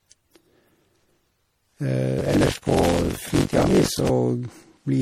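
Generation loss runs throughout: the speech sounds swirly, smeared and hollow, with blurred attacks and nothing above 17.2 kHz, likely from repeated MP3 re-encoding at 64 kbit/s. Buffer tearing from 2.18 to 4.11 s: writer and reader cross mid-buffer, so a large share of each period replays audio from a lap earlier, producing a robotic 46.9 Hz buzz that fits a 1024-sample buffer.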